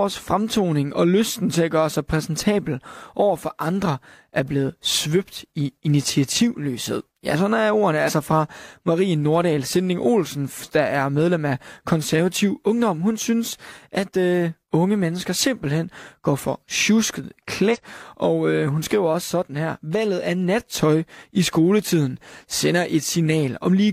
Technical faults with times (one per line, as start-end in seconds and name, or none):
8.04-8.11 compressed frames skipped
17.70-17.77 compressed frames skipped